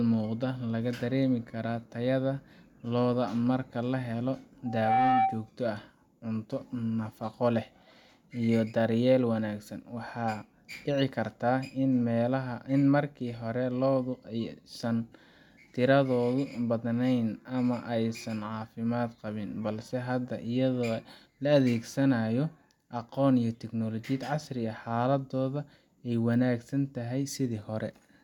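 Right after "lo'da marka lahelo", at 4.65 s, there's a loudspeaker feedback squeal: the mic is catching its own speaker, and the loop runs away at 770 Hz. The tone swells in about a third of a second, sits a few dB above the speech, and stops at 5.5 s.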